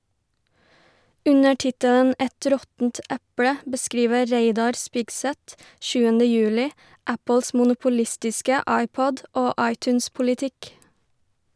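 Nothing stood out on listening to the speech recording as a technical fault.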